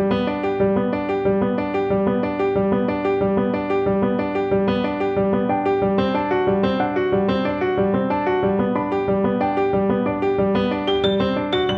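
No technical faults are audible.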